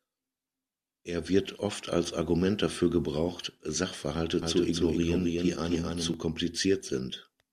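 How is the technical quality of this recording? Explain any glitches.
One glitch stands out. Doubled audio track from 4.42 to 6.14 s: the speech is likely captured again through a slower path, so a somewhat quieter, dry copy trails about a third of a second behind and cuts in and out abruptly.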